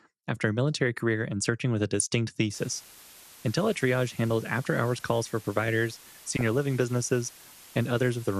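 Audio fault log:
throughout: MP2 compression. Likely low-rate MPEG Layer II coding, consistent with about 80 kbps, starves the upper sub-bands, leaving the speech dull, gurgling and granular.
1.91–2.07 s and 6.28–6.48 s: DAB burbling. A small fraction of bit errors slips past error correction, corrupting sub-band values so brief bubbling, squelchy chirps break over the speech.
2.54 s to end: low bit depth with dither. Dithered rounding to what sounds like about 7 bits turns quantisation error into a steady, even hiss roughly 20 dB below the signal.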